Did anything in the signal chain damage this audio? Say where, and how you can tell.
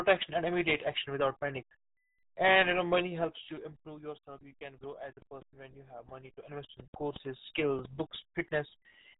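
Yes. Speech sounds muffled and gargly throughout, with nothing above 3.8 kHz. That points to the codec stage: the RealAudio 14.4 codec running at 8 kbit/s.

Ticking zipper noise rides the level as it drops about 15 dB from 2.99 to 4.14 s, after "and you know", then rises about 15 dB from 6.02 to 7.38 s. Gain processing applied unsmoothed 2 dB steps, about five per second.

An irregular train of clicks, around ten at 3.32 per second and about 10 dB above the sound, runs from 4.84 to 8.16 s after "you can". It's likely interference or a faulty connection or power supply.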